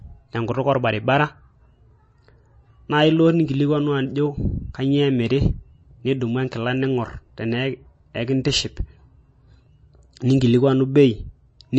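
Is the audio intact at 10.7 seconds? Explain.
No, not really. At 10.7 seconds, as everywhere else in the clip, you're hearing what's likely MP3 compression. The speech has nothing above 8.3 kHz, so the top is cut off flat, and the damage is plainly audible. Starved of bits, the encoder drops weak frequency lines that flicker on and off between frames, giving a watery, swirly edge and smeared attacks, which fits a low bitrate around 32 kbps.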